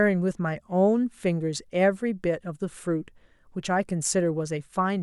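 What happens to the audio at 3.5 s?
Nothing goes wrong at 3.5 s: the speech continues intact through that moment, with no dropout, click, distortion or other disturbance.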